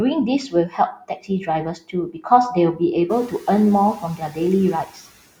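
Five times the noise suppressor mistakes speech for noise and pulls it down: 0.48 to 1.48 s, 1.64 to 2.26 s (the deepest dip, about 17 dB), 3.3 to 3.47 s, 4.0 to 4.38 s, and 4.85 to 4.97 s. The room noise that comes up around 3 s sits well under the voice, but syllables still sound swallowed and faint, with drops of about 11 to 14 dB elsewhere.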